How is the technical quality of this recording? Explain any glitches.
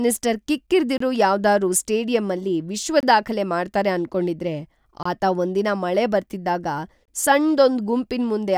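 The recording is marred by one recurring glitch. A gap between chunks appears at 0.98–1.00, 3.00–3.03, 5.03–5.05 and 7.05–7.08 s. The speech arrives in 2-second blocks, and each join leaves about 25 ms of silence, so no speech is missing, but the flow breaks with abrupt, hard-edged dropouts.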